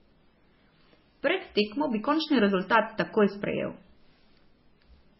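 Throughout the speech, nothing sounds above 5.6 kHz, and two distinct coding textures overlap instead of one. This is likely transcoding between lossy codecs, fitting low-rate MP3 followed by AAC.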